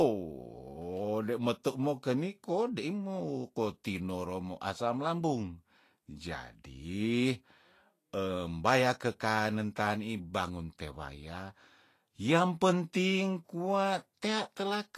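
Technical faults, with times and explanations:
Throughout: Vorbis compression. Plainly audible hiss and graininess sit over the speech, and nothing is heard above 14.2 kHz. The likely cause is a low bitrate near 34 kbps, which quantises treble detail into noise of similar energy, roughening tones and smearing attacks.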